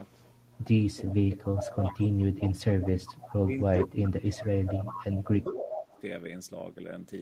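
From 0.07 to 0.64 s a faint delayed copy of the speech trails it by 401 ms, about 35 dB down. This is an echo leak, likely from a far end on loudspeaker whose echo canceller let part of its microphone pickup back into the call. The copy returns, stronger at around 15 to 20 dB below the speech, at 1.06 to 2.53 s and 2.84 to 3.33 s. Brief scraps follow at 3.81 to 3.87 s and 4.39 to 4.43 s, and a longer stretch at 4.90 to 6.01 s sits only about 10 dB down.

Overlapping the second echo stretch, from 1.17 to 1.99 s, the speech itself sinks by up to roughly 30 dB across most of that span. This is speech suppressed in double talk: with both sides active, the canceller likely could not tell the local talker from the returning echo and attenuated both. It happens again from 2.54 to 5.96 s, where about three seconds in total are pulled down by as much as roughly 25 dB, leaving the speech dipped and broken while the echo runs alongside it.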